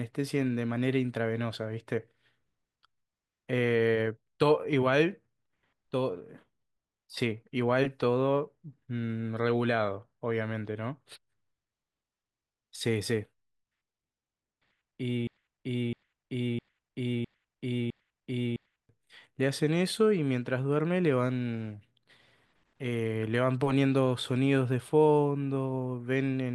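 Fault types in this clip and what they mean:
Broken-record loop: from 15.27 s to 18.89 s the speech stops moving forward and a single fragment of about 660 ms plays again and again, six times back to back with identical content and no gaps, before normal audio resumes. What should have been heard in those seconds is simply gone. Unlike an echo or a stutter, the copies don't fade or shorten. The exact, unchanging repetition points to a stalled player or stream replaying its last buffer, the likely cause.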